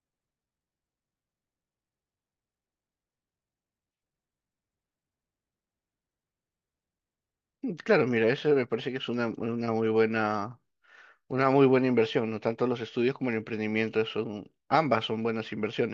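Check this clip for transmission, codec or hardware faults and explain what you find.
No faults turned up when I checked this clip.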